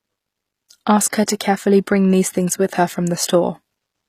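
A speech recording whose treble appears to have been rebuilt rather than transmitted, likely by HE-AAC compression at a low bitrate, around 24 kbps by the sound of it. Spectral band replication has copied lower bands upward, so nothing extends past 15 kHz, harmonics fail to align across the crossover, and s sounds come out plainly gritty and metallic. The same transform coding produces pre-echo: block quantisation noise spills ahead of sharp attacks, so a short hiss smears in front of the onset from 1.10 to 1.13 s, spreading about 30 ms, and again at 1.26 s over 14 ms, softening both attacks.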